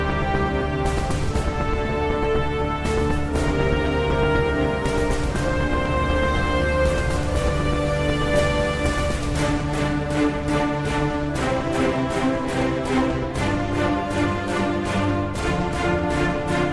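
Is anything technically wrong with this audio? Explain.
No, nothing stood out as technically wrong on listening to this audio.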